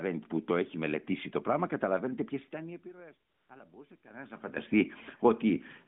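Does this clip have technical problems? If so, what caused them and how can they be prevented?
Yes. From 2.52 to 4.54 s, automatic gain rising lifts voice and room noise together by about 6 dB. The control is chasing a much quieter input after the talker moved away.

From 3.30 to 3.50 s, AMR comfort noise replaces the real background for 200 ms. The phone judged the sound silent and filled the gap with smooth synthetic hiss.

To prevent these, keep the talker at a steady distance from the microphone, and disable discontinuous transmission on the call if the link allows it.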